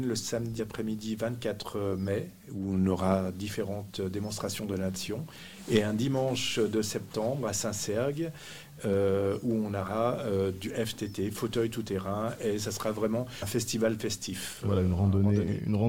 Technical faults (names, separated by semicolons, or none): compressed frames skipped